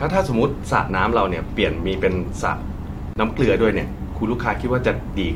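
At 3.14 s the speech drops out abruptly for about 25 ms, its edges smeared, then carries on from where it stopped. This is a gap at a join of encoded pieces: separately encoded segments were spliced untrimmed, leaving encoder delay and final-frame padding in place.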